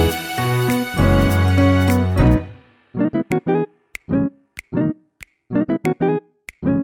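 At 2.20 s the pace jumps and stays fast to the end. This is a time-stretched section, running 1.89 times faster while the pitch holds steady. It sounds rushed. Software likely squeezed the audio to fit a length, dropping short pieces to keep pitch.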